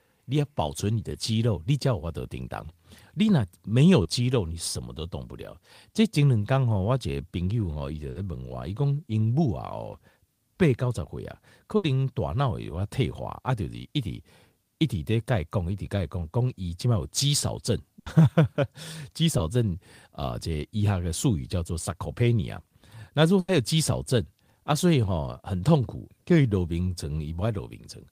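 Short concealed packet loss at 1.12–1.15 s, 4.02–4.06 s and 19.38–19.40 s: 10 to 30 ms of speech arrived too late, and the receiver's stand-in leaves a brief smear or wobble. A burst of packet loss at 8.10–8.16 s, 11.76–11.84 s, 17.99–18.07 s and 23.39–23.49 s drops 50 to 90 ms each time, heard as a fading buzz or hiss before the speech resumes further on.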